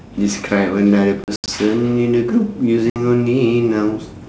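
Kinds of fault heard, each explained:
Packet loss on an ADPCM call: chunks of the G.722 stream drop out as hard-edged silences, 140 ms scattered over 1.24 to 1.49 s and 60 ms near 2.9 s. The decoder then loses sync, so sound returns briefly slightly distorted.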